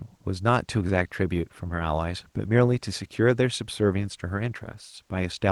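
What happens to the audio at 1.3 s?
Nothing goes wrong at 1.3 s: the speech passes through intact, carried on the ordinary call path with no dropout, glitch or distortion at that moment.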